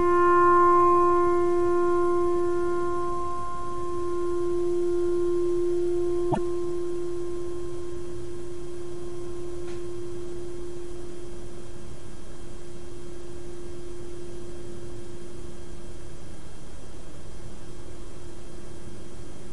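At 6.28 s to 6.38 s, a brief burst of about a tenth of a second cuts through the audio as a harsh chirp or blip. This is damaged data in a compressed stream: a short run of the encoded bytes is corrupt, so the decoder cannot interpret those frames correctly, loses its place in the bitstream and has to hunt for the next valid frame header before normal playback resumes.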